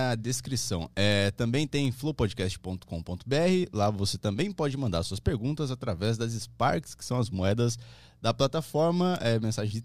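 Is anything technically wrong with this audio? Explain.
Yes, the speech carries word clock ticks from 0.21 to 9.71 s. About every fifth of a second, around fifty times, the receiving clock slips one sample against the sender's, roughly a 150 ppm mismatch. This produces sharp ticks of uneven strength, seen as thin broadband vertical lines on a spectrogram and tiny steps in the waveform.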